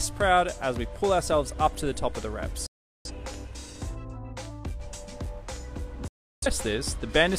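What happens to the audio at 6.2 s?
A digital broadcast dropout: from 6.08 to 6.47 s the receiver, losing valid frames, fades to silence in 3 ms instead of concealing the gap.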